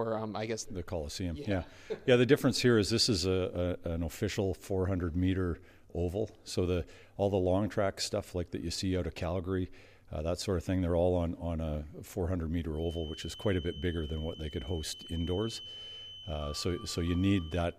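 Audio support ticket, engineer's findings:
Speaker-to-mic loop likely sitting at the edge of feedback, with gain just short of runaway. Result: feedback whistle, a thin steady 3 kHz tone from 12.69 s to 17.79 s, swelling and fading slowly, roughly 20 dB below the sound.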